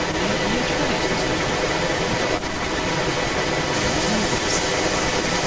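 A speech recording with a delayed second copy of the voice trailing it by about 125 ms from 0.0 to 5.5 s, roughly as loud as the direct speech or a little louder. This is an echo leak, likely from a far-end loudspeaker whose echo canceller let its microphone pickup return down the call path, band-limited to 8 kHz by call microphone processing.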